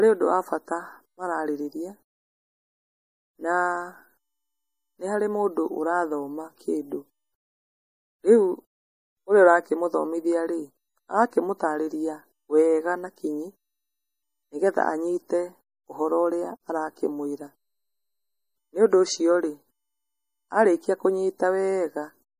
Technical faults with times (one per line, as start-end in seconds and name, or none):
0.00-22.39 MP3 compression